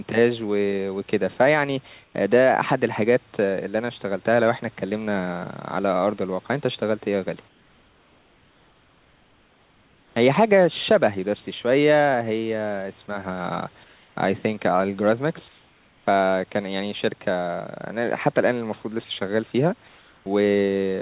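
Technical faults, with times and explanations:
2.04–2.14 s, 7.48–10.16 s, 13.84–14.16 s, 15.48–16.06 s, 19.88–20.26 s: comfort noise in place of the background. In each pause, the room's background turns into flat, featureless hiss about 1 to 4 dB quieter, most likely from discontinuous transmission filling the gaps with synthetic noise.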